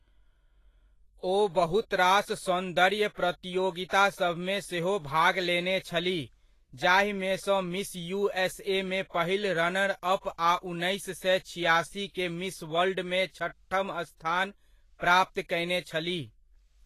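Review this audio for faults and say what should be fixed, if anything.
Vorbis compression, likely, across the whole clip: the speech has a hissy, grainy top and softened consonant attacks, and nothing is present above 14.2 kHz. The encoder has cut the band off there and quantised the remaining treble so coarsely that fine detail has turned into noise of similar energy. The damage is plainly audible, which fits a low bitrate of around 30 kbps. To prevent it, encode from the original source at a substantially higher bitrate or quality setting.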